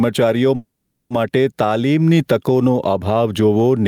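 Gain pumping runs through the whole recording. The input gain was likely set far too high for the microphone, so a fast limiter or compressor clamps down on every loud syllable and releases in the pauses. The background noise swells up whenever the talker stops and sinks under each loud sound, with a swing of roughly 10 dB. Loud and quiet passages sit unnaturally close in level, giving the speech a squashed, breathing quality.

A call audio freeze occurs from 0.55 to 1.13 s. Packets were likely held up in transit until the receiver's jitter buffer ran dry. The receiver kept extending the last bit of sound for about 550 ms, first as a brief fading buzz and then, for most of that stretch (about 450 ms), as silence. When the packets arrived, the speech resumed exactly where it had stopped. Nothing is lost, but a gap of about half a second is inserted and everything after it is pushed later.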